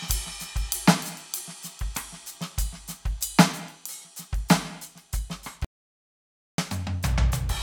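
Audio dropout to silence from 5.65 to 6.58 s: the music stops dead for 0.94 s with no room tone, likely because the input was lost while recording continued.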